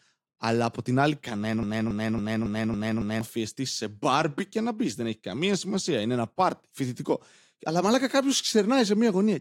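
From 1.63 to 3.21 s, a broken-record loop repeats one 277 ms fragment six times, likely from a stalled player. The spectrogram shows identical repeating blocks.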